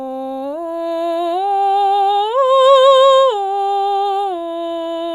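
No technical faults are audible anywhere in this music.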